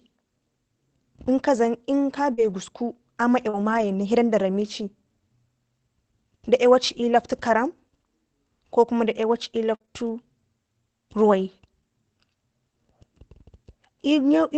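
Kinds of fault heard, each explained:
Lost packet rebuilt from error correction: rougher, noisier low-bitrate copies fill single and multi-packet losses near 1.37, 2.37–2.51, 3.53–3.83 and 6.87 s, seen as grainier, smeared spectrogram patches.
Short concealed packet loss: about 40 ms at 2.33 and 3.49 s continues the preceding sound, giving a brief smear.
Repeated packet loss (robotic sound): three gaps between 9.75 and 9.89 s, over half the span patched, sound choppy; the spectrogram shows repeated, striped frames with broken continuity.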